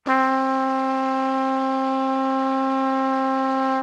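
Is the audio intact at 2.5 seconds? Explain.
Yes, at 2.5 seconds the sound passes through intact, with no dropout, glitch or distortion at that moment.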